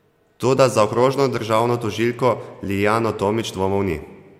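No technical fault can be heard anywhere in the speech recording.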